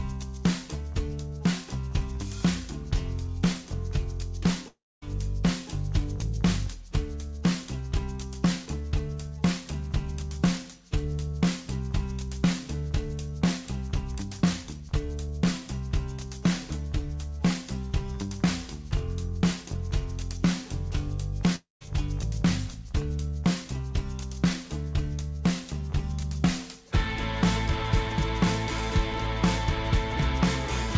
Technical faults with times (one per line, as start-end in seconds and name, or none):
4.68-5.04 long network dropout
21.56-21.87 long network dropout